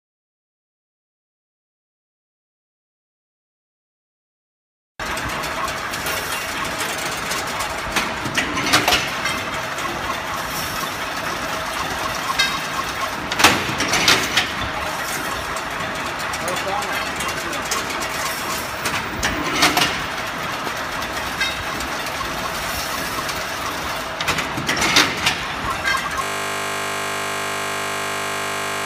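The audio carries two loud pops, at 17.24 to 17.26 s and at 20.67 to 20.69 s. Each is a single sharp transient that stands roughly 10 dB and 15 dB above the surrounding signal, with the sound continuing beneath it. They are likely caused by a voltage step from a switch, plug or static discharge. On a waveform each appears as a narrow spike towering over the programme, and on a spectrogram as a thin vertical line spanning the whole frequency range. From 26.24 s to the end the sound collapses into a system hang loop. A single 20 ms slice repeats over and over, more than a hundred times, producing a steady 50 Hz buzz. This fits a 20 ms audio buffer being replayed while the system is frozen. The waveform shows identical cycles repeating exactly, and the spectrogram shows an evenly spaced comb of horizontal lines at multiples of 50 Hz.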